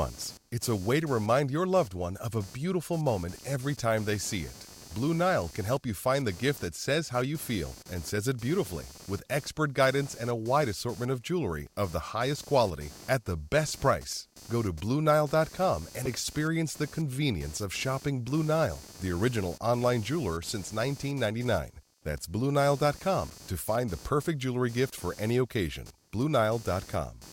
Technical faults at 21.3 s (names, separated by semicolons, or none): computer activity noise